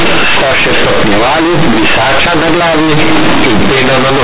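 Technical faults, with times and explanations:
Throughout, companded audio read as linear: mu-law bytes play as raw 8-bit samples, so sign changes swing half-scale, giving loud buzz; the waveform is bent out of shape, and the spectrogram fills the pauses with broadband noise up to 4 kHz.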